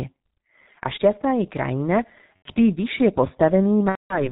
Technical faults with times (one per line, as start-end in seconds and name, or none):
0.00-4.32 G.723.1 codec
2.37-2.49 VoIP packet loss concealed by the speech codec
3.89-4.29 VoIP packet loss concealed by the speech codec